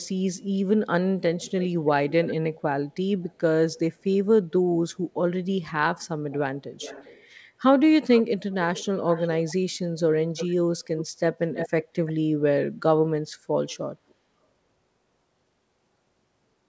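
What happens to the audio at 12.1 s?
At 12.1 s an echo leak is ending. It runs from 11.54 to 12.13 s. A delayed copy of the speech trails the original by 333 ms, roughly 10 dB quieter. This is likely a far-end loudspeaker echo that the canceller failed to remove.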